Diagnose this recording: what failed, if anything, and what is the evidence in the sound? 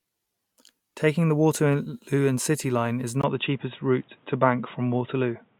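A 20 ms gap at 3.21 s, then boxy speech with nothing above 3.8 kHz and faint new noise: likely an input switched to a poorer device, at the driver stage.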